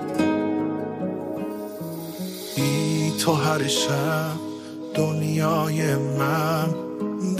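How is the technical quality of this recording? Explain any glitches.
The recording has one brief glitch near its end: a burst of DAB burbling from 7.07 to 7.13 s. For that roughly 60 ms, the sound is marred by short blips of noise. Weak reception let bit errors slip past the error correction, with an error rate on the order of a few tenths of a percent. The damage spans a handful of MP2 frames. Corrupted samples put short noise blips into single sub-bands, and corrupted scale factors that get through make sub-bands jump abruptly in level. On a spectrogram this appears as isolated, blocky horizontal patches of energy at scattered frequencies. The waveform shows a brief irregular flutter in amplitude.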